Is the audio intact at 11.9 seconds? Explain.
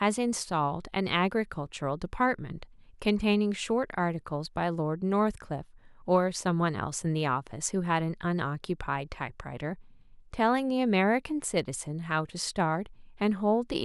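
No. At 11.90 s the speech has a single sharp click from dropped samples. A handful of samples, roughly four, are likely missing. The waveform jumps straight to a later value. Far too little is lost to remove any sound. The jump is heard as one click.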